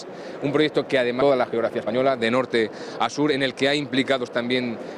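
At 1.21 to 1.23 s the audio makes a skip ahead: roughly a second of material is missing, and the two sides are butted together with no silence filling the gap. That join with no gap sets it apart from a dropout, and it points to the jitter buffer discarding queued audio after an overflow. From 1.30 to 4.48 s a jitter buffer speed-up follows, with the sound running at 108 % of normal speed while its pitch stays unchanged. Unlike a simple resampling speed change, nothing shifts upward in pitch. Short pitch-period pieces, about 0.3 s in total, are trimmed out to work off the excess buffered delay.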